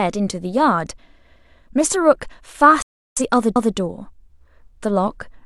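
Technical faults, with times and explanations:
2.82 to 3.21 s, digital broadcast dropout: the speech fades out in about 3 ms and stays silent for roughly 0.39 s before it returns, with about 341 ms of material gone. That loss points to a short run of frames that either never arrived or failed their checks, so the receiver muted until clean frames resumed. Unlike a splice or a stutter, the speech does not repeat or jump back. It simply continues later, with the missing part lost.
3.56 to 3.76 s, overlapping chunks: a 200 ms stretch of speech plays twice, so the sound stutters at the join. The audio appears to be handled in 2.0 s chunks, and this chunk began before the previous one had finished, so its opening duplicates the last fifth of a second. What separates this from the dropout is that nothing is missing. Material is repeated rather than muted, and the fault sits on a chunk boundary.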